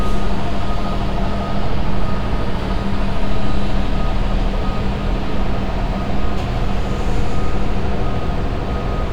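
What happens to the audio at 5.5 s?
Nothing goes wrong at 5.5 s: the sound continues intact through that moment, with no dropout, click or distortion.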